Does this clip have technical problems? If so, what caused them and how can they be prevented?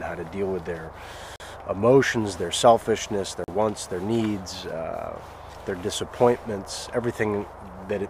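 Yes. The audio drops out abruptly twice, from 1.36 to 1.40 s and again from 3.44 to 3.48 s, each a short 40 ms hole that cuts in and back out with no fade. This is a block of digital silence: a run of zero-valued samples replaces the audio. Either the program failed to fill its output buffer in time, or a processing step produced invalid values that came out as silence. To prevent it, give the audio thread enough buffer headroom and priority, and check processing for invalid values before output.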